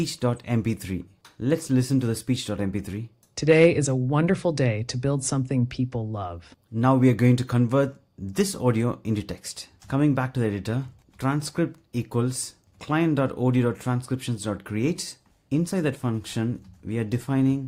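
No technical faults can be heard anywhere here.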